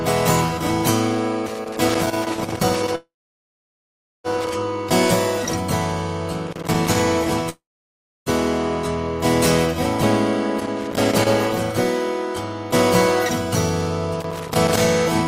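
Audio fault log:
1.46–4.55 s, 6.47–7.04 s, 10.59–11.28 s, 14.20–14.81 s: loose connector crackle, a contact making and breaking that chops the signal into irregular scratchy bursts, seen as dense vertical spikes on the spectrogram.
2.95–4.27 s, 7.49–8.29 s: call audio freeze, sound held as a fading buzz and then silent for about 1.15 s and 0.65 s, likely from late packets draining the jitter buffer. It resumes where it stopped, so nothing is lost but everything afterwards runs about 1.29 s and 0.77 s later. The waveform shows a decaying tail and then a flat gap.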